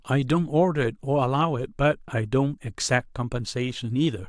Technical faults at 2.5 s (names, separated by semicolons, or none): none